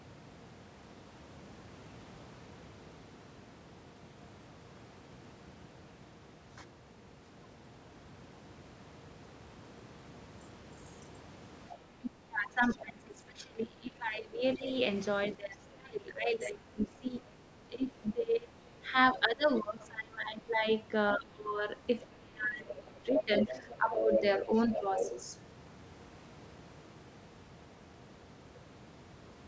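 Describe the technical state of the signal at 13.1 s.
At 13.1 s the speech sits inside a stretch of speech suppressed in double talk, from 12.0 to 14.66 s. The echo canceller, likely unable to separate it from loudspeaker echo, pulls it down by up to about 30 dB. On the waveform the envelope collapses and turns ragged, and on the spectrogram the upper energy thins and fragments.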